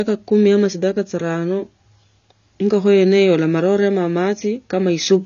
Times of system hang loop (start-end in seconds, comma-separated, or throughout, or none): none